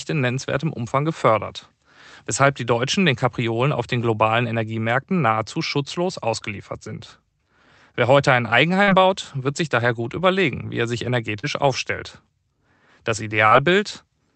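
Short concealed packet loss struck three times. About 40 ms of audio never reached the decoder, so the receiver extended the preceding speech and blended back in. This leaves a brief smear after "heute ein", before "baut wird sich daher", at 8.83–8.90 s; another after "überlegen wie er sich" at 11.39–11.46 s; and a third at 13.47–13.54 s. The call codec's band limit near 8 kHz applies throughout.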